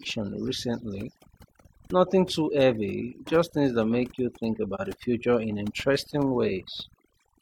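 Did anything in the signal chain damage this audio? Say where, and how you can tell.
Yes, two things. First, overdone noise removal somewhere in the processing, and it runs through the whole clip. The background has been pushed down, but it sparkles with little twinkling specks. That's a noise reducer set too hard: it slams individual frequency bands down whenever they sit near its noise estimate, and the quieter parts of the voice get swallowed along with the noise.

Second, at the codec or network stage there's an AAC frame loss with muting at about 4.75 to 4.81 s. You hear a short, soft-edged gap. The sound fades out and back in instead of cutting hard. The missing stretch fits a single dropped frame of about 43 ms. The decoder zeroed that frame's spectrum, and the overlapping windows on either side smeared the silence into a gentle dip spanning roughly 60 ms.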